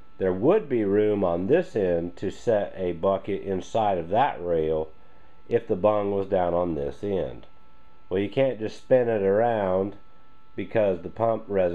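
Nothing is technically wrong with this audio clip, and there are no faults to place at any time or trace to any cause.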